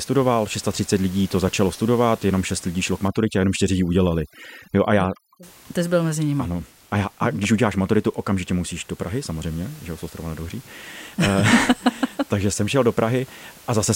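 Overdone noise removal runs from 3.08 to 5.43 s, where a noise reduction stage set far too strong pulls down any frequency band near its noise estimate, taking quiet parts of the speech with it and leaving the background dropped and broken up into twinkling specks, against room noise sitting about 25 dB below the speech elsewhere.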